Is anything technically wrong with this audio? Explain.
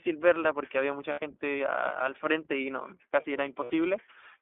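Yes. Throughout, the speech sounds thin, boxed-in and faintly rough and synthetic, with nothing above about 3.5 kHz and little below 300 Hz. This is the iLBC codec, a narrowband VoIP coder that encodes each 20 ms frame's excitation independently of its neighbours. Its damage here is plainly audible, and the texture fits the 15.2 kbps mode. The band-limiting comes from the telephone-style line it carries.

Two lost iLBC frames dropouts occur, from 1.12 to 1.20 s and from 3.64 to 3.71 s, each lasting about 60 ms. Each one sounds like a brief held, slightly buzzy or breathy vowel where the speech should move on. When packets go missing, the decoder fills the hole by repeating the last pitch cycle blended with noise. Each gap fits three lost 20 ms frames. Because iLBC frames stand alone, the voice snaps back cleanly right afterwards.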